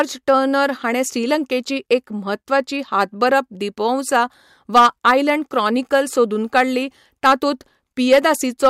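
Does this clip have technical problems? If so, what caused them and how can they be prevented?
Yes. Hard clipping runs through the whole clip. The speech was driven about 8 dB beyond what one stage in the chain could pass, so its highest peaks were sliced flat. Only a small fraction of samples, under one percent, reach that ceiling. The damage sits on the peaks, heard as brief crackle on loud syllables. Those flat tops create harsh harmonics high in the spectrum. Lower the input gain so peaks stay well below full scale.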